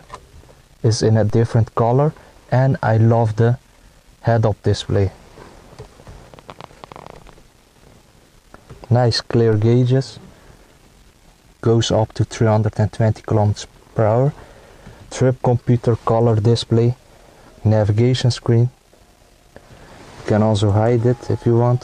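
A DC step occurs at 1.30 s and again at 9.53 s: the waveform's zero line abruptly jumps by about -22 dBFS, as if an offset were suddenly switched into the signal path. Each jump is heard as a low thump, and the offset then decays, consistent with a high-pass around 2 Hz pulling the baseline back toward zero, while the sound carries on unaltered above it.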